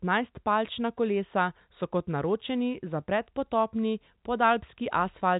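Nothing here counts as a fault: the speech comes over ordinary G.711 telephone coding, so the sound stops at about 3.8 kHz as a phone line should, with just that faint level-following hiss underneath.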